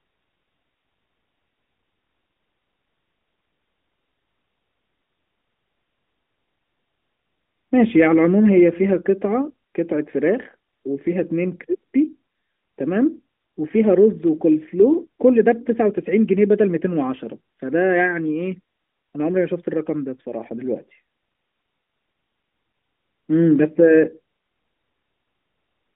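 Listening through this speech recording, nothing stood out as a technical fault, with the sound carried over a narrowband mobile line as expected.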